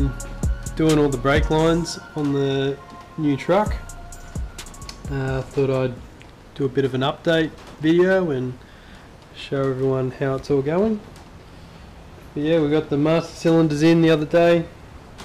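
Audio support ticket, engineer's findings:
Hard clipping, six bursts: 0.83–1.72 s, 3.50–3.61 s, 6.78–7.41 s, 7.88–8.17 s, 10.53–10.84 s, 12.51–14.57 s. Peaks driven past a gain stage or converter ceiling by about 1 to 6 dB, tops cut flat. Harsh crackle on loud passages, worst in the final burst at about 6 dB over.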